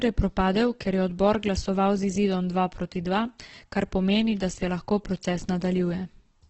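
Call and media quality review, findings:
Opus compression, throughout. Speech rough, grainy and noisy, nothing above about 8.2 kHz. Likely low-rate Opus in CELT mode: band energies kept, bit-starved bands filled with folded or noise content. Heavy damage, consistent with roughly 12 kbps wideband.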